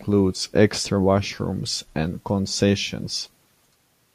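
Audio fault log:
No faults are audible anywhere in this speech recording.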